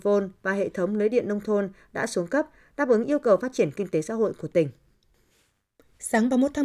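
Nothing in this speech recording stands out as a technical fault; it just runs along without anything going wrong that a listener would catch.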